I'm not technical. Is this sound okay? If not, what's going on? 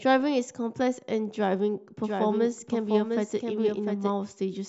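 No. A doubled audio track runs from 2.04 to 4.12 seconds. A second, somewhat quieter copy of the speech trails about seven tenths of a second behind and starts and stops abruptly. The sound was likely captured twice, once through a slower path.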